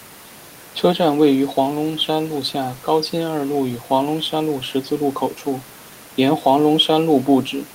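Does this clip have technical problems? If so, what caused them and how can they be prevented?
No, there are no technical faults in this speech recording. The only background sound is the room noise around the microphone, about 25 dB below the speech, which belongs to the recording itself.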